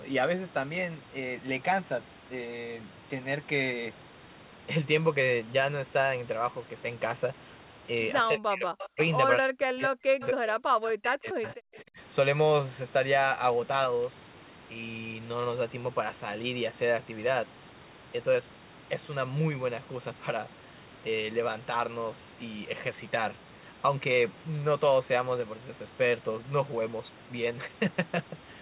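Between 8.27 and 11.98 s the speech dips sharply and breaks into pieces, falling by as much as roughly 40 dB at 8.27–8.99, 9.38–10.55 and 10.93–11.66 s, with a shallower dip at 11.83–11.98 s. This is speech suppressed in double talk, likely because the echo canceller mistook simultaneous talk for loudspeaker echo and turned everything down.

Overlapping those dips, a faint delayed copy of the speech trails about 268 ms behind, at 8.78–9.07, 10.22–10.27 and 11.43–11.55 s, sitting about 15 dB below the speech. This is echo leak: one side's loudspeaker output likely reached its microphone and slipped past cancellation.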